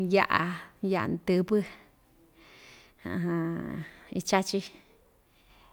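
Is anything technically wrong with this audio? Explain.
No, there's nothing technically wrong here; this bit of speech comes through without any problems I can pick out.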